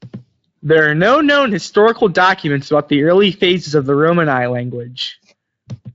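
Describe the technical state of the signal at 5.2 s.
At 5.2 s the speech is intact, with no fault at that moment; it passes through the Speex codec, and the audio has nothing above about 7.6 kHz.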